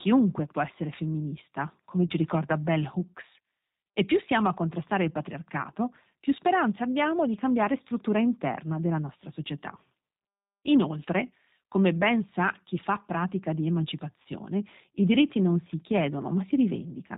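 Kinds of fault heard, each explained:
G.729 codec, throughout: speech is rebuilt from a vocal tract filter and sparse pulses, which fits 8 kbit/s, sounding plainly rough, synthetic and capped at 4 kHz.
VoIP packet loss concealed by the speech codec, at 2.07 s after "può essere femminista come" and 14.22 s after "chi fa pratica di": the decoder extrapolates about 30 ms of fading buzzy tone or coloured noise, consistent with one lost packet.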